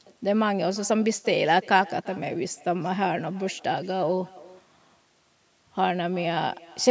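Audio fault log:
Throughout, echo with no canceller: every phrase comes back at you roughly a third of a second later as a faint, thin shadow, sitting about 23 dB under the direct sound. That's the far end playing the call out of a loudspeaker, their mic catching it, and nothing scrubbing it out before it returns over the network. The top end stopping at 8 kHz is just the call microphone processing, and that part's fine.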